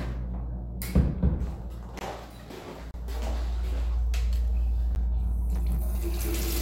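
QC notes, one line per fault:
1.99–2.01 s, 2.91–2.94 s and 4.95 s: block of digital silence. The audio drops to silence for about 20 ms, 30 ms and 10 ms, then resumes, with no fade at either edge. The waveform jumps straight to silence and back. The 10 ms gap registers as a tick, while the 20 ms and 30 ms gaps open into short holes. The output buffer probably wasn't filled in time, leaving those blocks empty.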